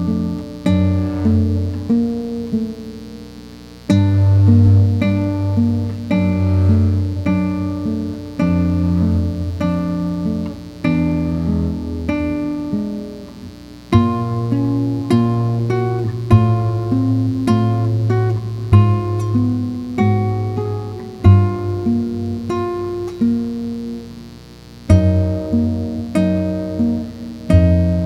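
A steady, raspy mains buzz runs throughout, sitting about 25 dB below the sound: sharp switching spikes at twice 60 Hz, with harmonics reaching into several kHz.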